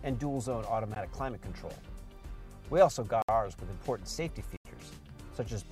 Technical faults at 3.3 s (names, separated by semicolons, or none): block of digital silence